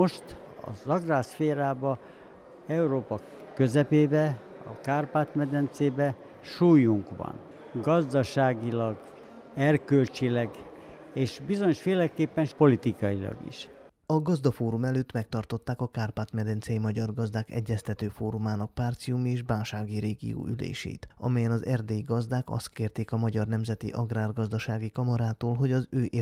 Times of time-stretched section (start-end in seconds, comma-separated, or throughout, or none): none